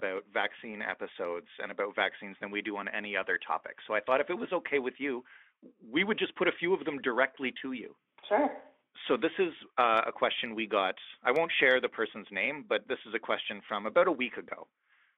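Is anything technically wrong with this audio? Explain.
No, nothing is technically wrong: this is speech over a Speex link at roughly 18 kbps, confined to the telephone band of about 300 Hz to 3.5 kHz, with codec damage that is faint at most.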